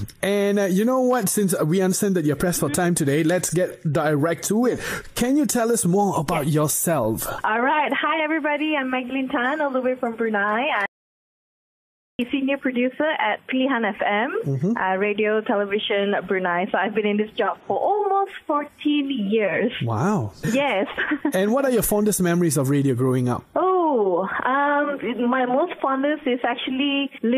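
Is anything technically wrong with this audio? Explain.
Yes. From 10.86 to 12.19 s, an audio dropout to silence removes about 1.33 s of sound, likely from a lost input writing silence. It shows as a flat waveform and a blank spectrogram gap.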